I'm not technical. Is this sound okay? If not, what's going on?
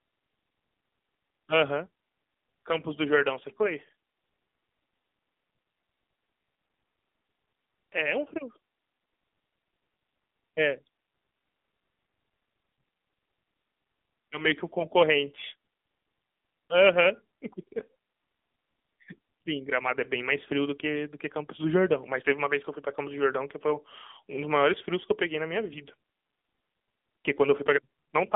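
No. The whole recording has gone through the AMR narrowband mobile codec, the old phone-call format. It drops everything above 3.8 kHz, so speech sounds muffled and boxy. It also squeezes the sound hard, leaving plainly audible buzzy, synthetic damage throughout.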